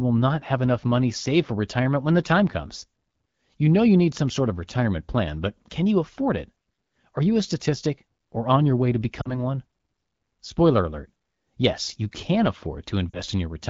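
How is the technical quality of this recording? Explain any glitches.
Two short glitches mar this wideband speech recording. At 9.21 to 9.44 s and 13.10 to 13.21 s, lost AMR speech frames make the voice drop briefly to near silence. The decoder repeats its last good settings at falling gain, then the sound recovers rough.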